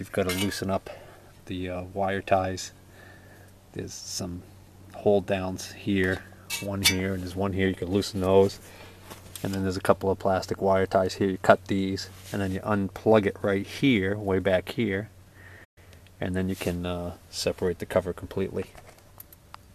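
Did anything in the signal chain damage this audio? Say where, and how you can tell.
Yes: the sound fades to silence at 15.64 s and returns at 15.78 s, a digital broadcast dropout where the receiver muted through failed frames.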